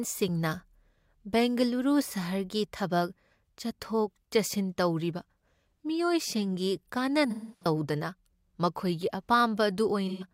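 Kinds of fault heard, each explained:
AAC frame loss with concealment: at 7.30 to 7.66 s and 10.08 to 10.25 s, compressed frames drop out and the decoder rebuilds them from the last good spectrum, giving smeared, phasey patches; the first holds scattered gaps, the longest around a fifth of a second.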